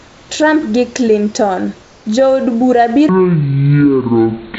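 From 0.00 to 0.29 s and again from 1.82 to 2.06 s, the room background drops out for comfort noise, a flat, featureless hiss about 2 to 3 dB quieter, likely from discontinuous transmission. From 3.09 s to the end, a section at the wrong speed runs at 0.574 times normal, roughly ten semitones lower and dragging, likely from a clock mismatch.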